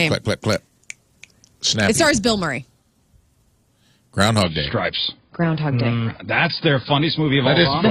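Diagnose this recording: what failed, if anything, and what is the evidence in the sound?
At 4.43 s the adaptive stream steps down to a lower bitrate until the end. Everything above 5.1 kHz vanishes abruptly with no gap, which fits a network slowdown forcing roughly 16 kbit/s AAC.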